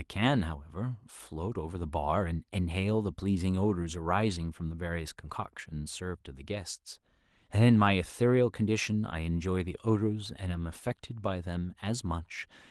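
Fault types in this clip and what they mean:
No faults can be heard in this speech recording.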